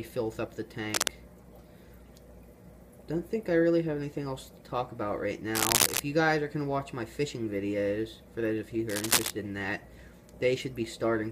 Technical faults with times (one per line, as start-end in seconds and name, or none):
0.92-1.08 cable scratch noise
5.54-6.00 cable scratch noise
8.89-9.30 cable scratch noise